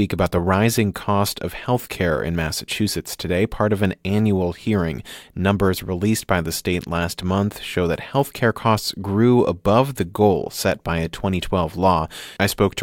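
No technical faults can be heard anywhere in this speech recording. Nothing in the signal needs a timestamp or an account of something going wrong.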